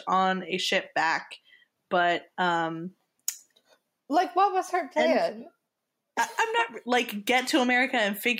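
The input gain was likely set far too high, so a fast limiter keeps clamping down on each loud syllable. Throughout the speech this is heard as gain pumping: the gain swings by around 5 dB under louder passages, leaving the delivery squashed.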